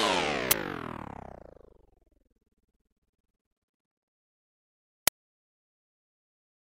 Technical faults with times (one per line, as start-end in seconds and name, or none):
0.51 uninitialised buffer
5.08 uninitialised buffer